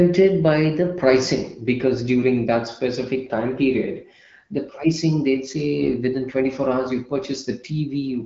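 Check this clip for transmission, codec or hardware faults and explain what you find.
One transmission fault stands out in this AMR-WB speech at 12.65 kbit/s. AMR bit errors hit from 5.82 to 5.89 s, just after "period the pricing they'd". The span fits about three 20 ms frames. A few percent of their weakly protected bits arrive flipped. Pulse positions, pitch, gain and spectrum values come out wrong. The voice keeps roughly its pitch and level. It briefly turns hoarse, scratchy and gargly.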